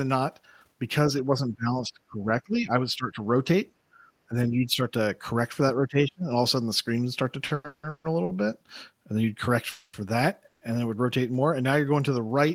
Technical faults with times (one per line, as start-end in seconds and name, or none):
1.20-3.34 speech suppressed in double talk
3.93-3.99 speech suppressed in double talk
4.29-4.85 speech suppressed in double talk
5.87-6.27 speech suppressed in double talk
7.47-8.31 repeated stalls (stutter)
9.71-9.95 call audio freeze
10.47-10.63 call audio freeze